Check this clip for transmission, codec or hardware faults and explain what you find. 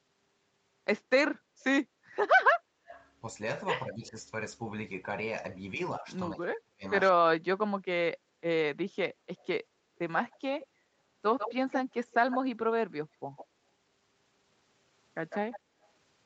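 Two faults are audible in the speech: echo leak in five places and speech suppressed in double talk in two, both pointing to an echo canceller.

Echo leak appears at 2.86 to 3.08 s and 4.06 to 4.10 s, delayed 188 ms, and at 9.38 to 12.37 s, 13.36 to 13.46 s and 15.3 to 15.6 s, delayed 149 ms. The likely cause is a loudspeaker whose pickup the canceller missed. The leaks sit about 10 to 30 dB under the speech. The long 9.38 s stretch, at about 10 dB down, is the clearest. On a spectrogram this looks like faint, time-shifted copies of the speech's harmonic bands.

Speech suppressed in double talk occurs at 3.85 to 4.15 s, a dip of roughly 10 dB, and again across 5.77 to 8.06 s. In that second stretch, about one and a half seconds are pushed down by as much as roughly 40 dB. The likely cause is the canceller muting the near talker during overlap. The waveform shows sudden envelope holes and the spectrogram shows blanked columns, against a band that stops at 8 kHz.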